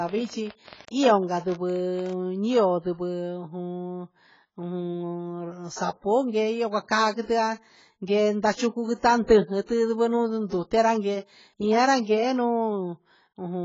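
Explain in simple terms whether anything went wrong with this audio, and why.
A train of clicks runs from 0.09 to 2.6 s: about twenty similar ticks, roughly 8.4 per second, at an uneven pace. The likely cause is a pulse leaking into the recording path, such as interference from nearby equipment or a faulty connection or power supply.

AAC compression affects the whole speech clip, with heavy damage: nothing remains above about 7.6 kHz, so the sound is dull and smeared. This most likely comes from a low-bitrate AAC encoding discarding detail it judged less audible to save space.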